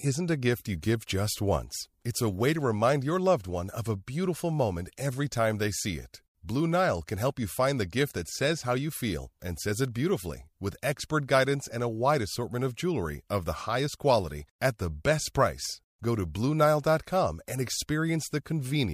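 No technical faults are audible.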